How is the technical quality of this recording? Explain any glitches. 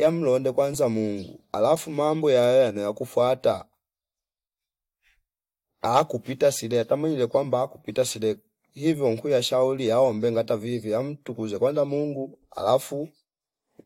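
Nothing in this speech recording glitches at all, so there's nothing to explain.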